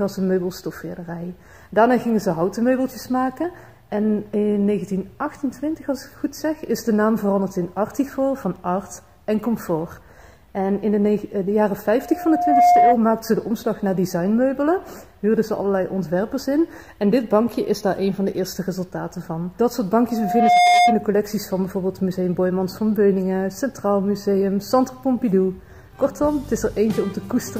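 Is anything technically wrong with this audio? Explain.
Yes. Loudspeaker feedback squeal occurs twice, from 11.97 to 13.00 s and from 20.09 to 21.07 s. A microphone picks up its own loudspeaker, and at 713 Hz the loop gain exceeds one, so that tone reinforces itself, building over well under a second to about 10 dB above the program before it stops. On a spectrogram, each event is a bright horizontal line at 713 Hz. In the waveform, the envelope visibly swells.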